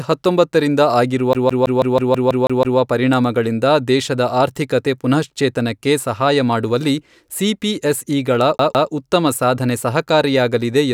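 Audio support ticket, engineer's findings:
CD stuck on one turn, 1.33–2.79 s and 8.58–8.91 s. Same 162 ms of speech repeats, nine then two times. Muted jumps. Scratch throwing the laser back one track.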